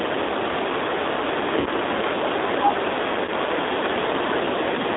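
G.729 codec damage runs through the whole clip of speech. The sound points to G.729A at 8 kbit/s, which rebuilds each 10 ms frame from a vocal tract filter, a pitch predictor and a few pulses rather than the original waveform. The line passes only about 300 Hz to 3.7 kHz, so the speech is thin and muffled. The coarse pulse modelling is plainly audible as a rough, slightly synthetic quality in the speech.

VoIP packet loss concealed by the speech codec appears twice, first from 1.60 to 1.68 s and again from 3.25 to 3.30 s. The first gap, about 60 ms of missing audio, fits two lost packets, and the second, about 30 ms, fits one. In each, the decoder fills the hole by repeating its last pitch and filter at falling gain, so the speech smears into a buzzy tone or coloured noise that fades. Because each frame builds on the one before, the sound stays weak and distorted briefly after the real audio resumes.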